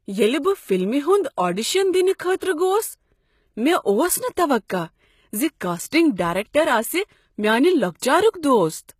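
Throughout the speech, sibilants sound gritty and lispy and the treble is plainly synthetic, with nothing above 14.9 kHz, likely HE-AAC compression rebuilding highs by band replication at roughly 20 kbps. From 2.36 to 2.41 s, pre-echo puts a brief hiss before an attack, as block-spread quantisation noise smears about 49 ms ahead of it.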